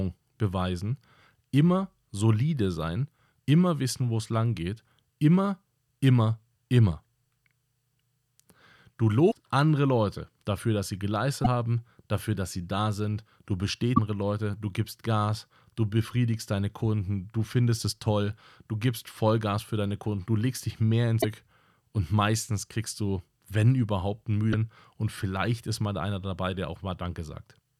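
Speech interrupted by five short glitches, each about 50 to 65 ms long, at 9.28–9.34 s, 11.41–11.47 s, 13.93–13.99 s, 21.18–21.25 s and 24.49–24.54 s. These are damaged data in a compressed stream: corrupted bytes make the decoder misread frames and lose sync until it locks onto the next valid frame header.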